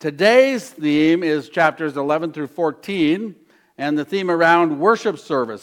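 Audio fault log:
No audible faults detected.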